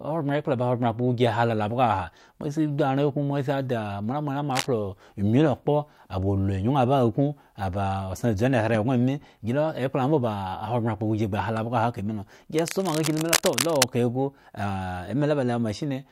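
A worn cable, connector or control being moved is the likely cause of the cable scratch noise in this speech recording, as a contact whose resistance jumps erratically injects dense, irregular bursts of noise into the signal. It sounds like scratchy rustling laid over the speech, only a few decibels below it: a brief burst from 4.51 to 4.67 s, then a longer stretch from 12.54 to 13.84 s lasting about 1.3 s.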